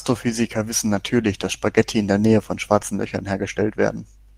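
At 0.95 to 0.97 s there's a lost packet rebuilt from error correction. What sounds like a single packet went missing, and the decoder filled those 20 ms from the low-bitrate backup copy carried in the next packet. There's no gap, just a brief rougher, noisier patch in the speech.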